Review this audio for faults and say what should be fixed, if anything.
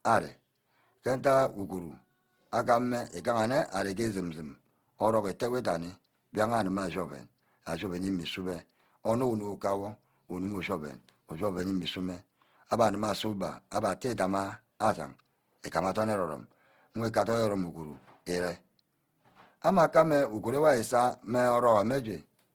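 Throughout the clip the speech carries plainly audible Opus compression artefacts, likely from encoding in Opus's CELT (music) mode at a low rate. The roughness points to around 16 kbps. The encoder keeps each band's energy but fills under-budgeted bands with folded or noise-like content, so the speech sounds grainy and rough rather than hollow or swirling. Bandwidth stays full, with content reaching about 20.3 kHz. To prevent it, encode at a higher bitrate.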